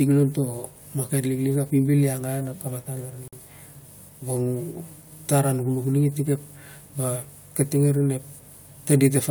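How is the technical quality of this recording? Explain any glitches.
The recording has one glitch in the speech: at 3.28 to 3.33 s, a 48 ms gap cuts in with smeared edges before the sound resumes where it stopped. That is a gap at a join of encoded pieces: separately encoded segments were joined without trimming their start delay and end padding.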